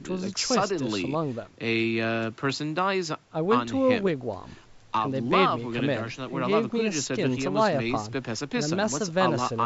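No technical faults can be heard in this speech; the lowest bass is trimmed by the call's microphone processing, which is normal.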